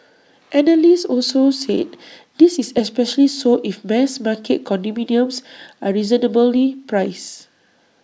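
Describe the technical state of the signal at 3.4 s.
At 3.4 s the speech signal is intact, with no audible dropout, click, distortion or other technical fault at that moment.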